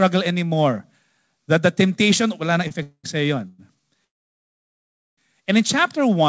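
Speech carried over a WebRTC call path, band-limited to nothing above 8 kHz, consistent with G.722 at 64 kbps. Right after "the temptation will na", a short stall from a late packet appears at 2.68–2.73 s: the last sound is held about 26 ms too long with a slight buzz or dip, then resumes where it stopped. Unlike a freeze, it never decays into silence. Call audio freezes follow at 2.83–3.06 s, 3.48–3.60 s and 4.04–5.19 s, likely from packets held up in transit draining the jitter buffer. Each stretches the last sound into a fading buzz or hiss, reaching about 80 ms of silence in the first and over a second of silence in the last, before resuming where it left off.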